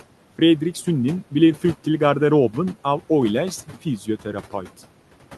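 Across the whole recording, a noise suppressor acts on every band it judges to be steady noise and pulls it down by about 12 dB, frame by frame. The room noise, sitting roughly 20 dB under the speech, drops away in the pauses and climbs back beneath each phrase. All of this sits above a call-codec top end that stops near 12 kHz.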